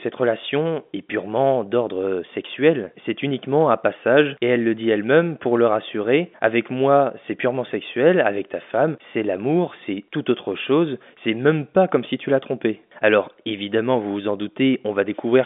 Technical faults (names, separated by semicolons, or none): none